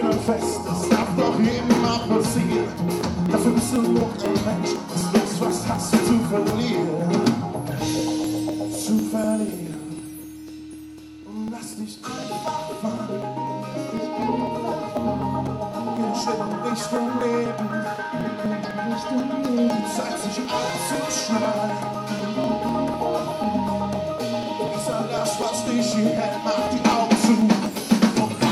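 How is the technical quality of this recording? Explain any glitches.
The recording has one clear problem: periodic USB or driver dropouts running from 0.28 s to 28.41 s. Every 0.249 s, something stalls the USB bus or audio driver and roughly a millisecond of audio just gets skipped. You hear a steady tick, about four per second and around a hundred in all, wherever there's signal.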